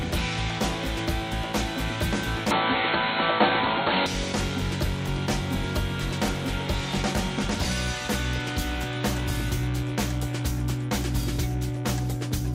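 From 2.51 to 4.06 s the sound turns dull, with nothing above 4.3 kHz, shifts about 5 dB in level and gains a faint new noise floor, without a gap. Likely an input switched to a poorer device; the level and noise changes point away from plain filtering.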